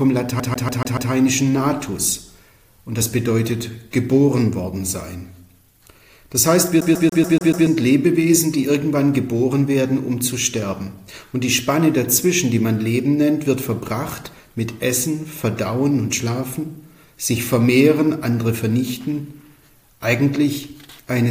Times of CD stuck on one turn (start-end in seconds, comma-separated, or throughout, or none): 0.40-1.12, 6.81-7.67